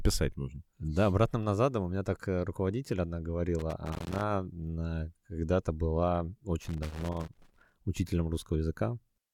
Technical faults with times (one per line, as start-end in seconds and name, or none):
3.59-4.23 loose connector crackle
6.61-7.74 loose connector crackle